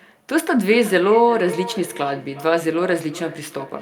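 From 0.42 s to the end, feedback echo between two devices: a nearby device replays the call and its microphone sends it back, beyond either echo canceller's reach. Distinct repeats recur roughly every 0.4 s, peaking about 14 dB below the speech, evenly spaced rather than a reverberant smear.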